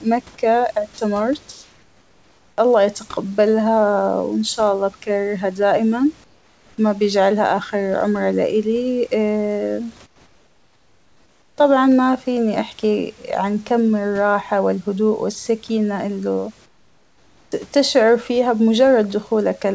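At 0.94 to 0.98 s there's a short hole, about 40 ms, where the speech gives way to a steady hiss for a moment before picking up again. That's sound dropped by the voice detector: the sender most likely took the sound for background, stopped transmitting, and the receiver patched in comfort noise until the detector triggered again.

Then come four stretches of comfort noise in place of the background, at 1.52 to 2.58 s, 6.24 to 6.78 s, 10.06 to 11.58 s and 16.66 to 17.52 s. The likely cause is discontinuous transmission. In each pause the sender goes quiet and the receiver fills in synthetic noise roughly shaped like the room. You hear the real room noise, which sits about 35 dB under the speech, swapped for a flat, featureless hiss, and each swap gets quieter than the last. The first is about 3 dB down, then about 6, about 8, and finally about 10 dB.

Right at the end of that last pause, 17.49 to 17.52 s, the speech comes back with its first 30 ms missing. 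That's an onset clipped by the voice detector, likely because the detector was slow to notice the sound restarting. The beginning lands abruptly, without its soft attack. Throughout, nothing reaches above 8 kHz, which fits a wideband codec like G.722.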